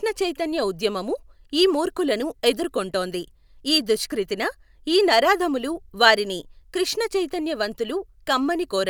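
Nothing goes wrong anywhere in this bit of speech, so there's no fault here to point out.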